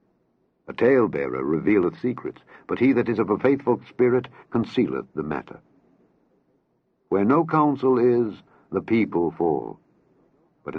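No technical faults are audible.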